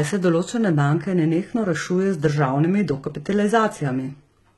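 HE-AAC compression, throughout the speech: the treble is likely rebuilt by spectral band replication from copied lower bands, which fits a very low bitrate near 16 kbps. S sounds turn gritty and lispy, the damage is heavy, and nothing remains above 11.8 kHz.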